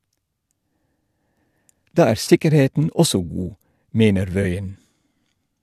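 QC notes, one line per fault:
2.24–2.30 s and 4.42–4.46 s, corrupt frame concealed: two brief concealed spans in the speech, 60 ms and 36 ms long. Damaged AAC data was detected and covered by the decoder, spanning about two frames and then one.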